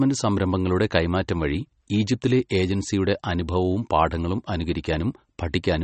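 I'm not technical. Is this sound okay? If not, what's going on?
No, the speech sounds watery and dull throughout, with nothing above about 8.4 kHz. That is likely MP3 compression squeezed too hard, discarding detail to save space.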